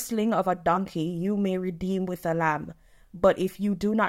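No technical faults are audible.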